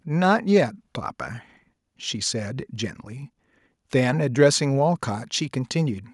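No technical faults can be heard anywhere in this speech recording. Nothing in it points to a problem with how the audio was captured, processed or delivered.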